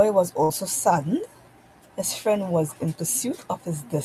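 Speech, with one burst of packet loss at 0.43 to 0.53 s. A run of packets never arrived in time, so the receiver stretched the last sound for about 61 ms, fading it down, then jumped ahead, leaving roughly 60 ms of speech simply gone.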